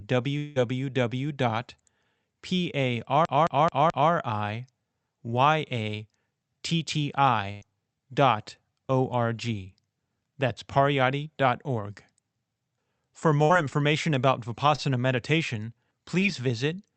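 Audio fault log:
0.37–0.58 s, long network dropout: a fading buzz or hiss covers roughly 180 ms with no silence, then the sound jumps ahead. Likely a stalled stream the receiver papered over.
3.25–4.12 s, CD stuck on one turn: the same 216 ms slice repeats four times with tiny mutes between, giving that fast, even skipping-disc stutter.
7.52–7.63 s and 13.43–13.51 s, burst of packet loss: about 100 ms and then 60 ms go missing. Each gap becomes a fading buzz or hiss before the sound resumes, the second just before "information about".
14.75–14.80 s and 16.20–16.24 s, short concealed packet loss: about 20 ms drops out each time. The first comes right after "information about". Each hole gets filled with a quick smear or wobble.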